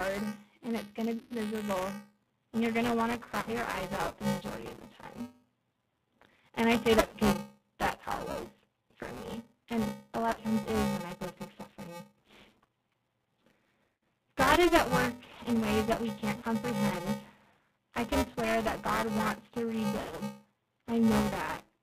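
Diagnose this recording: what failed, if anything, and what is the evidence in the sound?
The codec stage is at fault throughout. The speech is band-limited with nothing above 4 kHz, and it has a plainly audible rough, slightly synthetic texture. That points to G.729 at 8 kbit/s, which rebuilds each 10 ms frame from a vocal tract filter, a pitch predictor and a few pulses. A transform codec would instead give swirly, smeared highs. This model-based coding produces a buzzy roughness and clean speech that still sounds rebuilt.

The driver or buffer stage shows buffer tearing across the whole clip. A steady robotic buzz at about 345 Hz rides on the sound, and it is present only while there is signal. That rate fits a 128-sample buffer at 44.1 kHz. The writer and the reader have slipped, so roughly a fifth of each period replays audio from around 10 ms earlier, with hard joins on both sides. 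Mains hum would sit at 50 or 60 Hz and persist through silence, which this buzz does not.

On the network side, VoIP packet loss concealed by the speech codec occurs at 1.18–1.36 s, 3.40–3.54 s, 7.06–7.17 s (after "I say that"), 10.31–10.40 s (between "me and a lot" and "times is when I"), 13.84–14.01 s, 16.39–16.44 s (after "ways that we can't") and 20.01–20.19 s. The gaps are 30 to 180 ms long. At each one the decoder extends its last pitch and filter into a fading buzzy tone or coloured noise, and the speech stays weak for a short while afterwards. Plain dropouts would simply go silent instead.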